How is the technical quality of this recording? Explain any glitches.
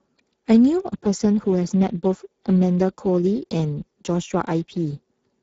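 The technical quality is limited by Speex codec damage, which is plainly audible throughout the speech. Speex is a CELP coder that rebuilds speech from a predicted spectral envelope plus a coded excitation signal. At a rate consistent with roughly 10 kbps, too few bits reach the excitation, so the speech sounds noisy and hoarse. The band stops at 7.8 kHz, which points to wideband 16 kHz operation.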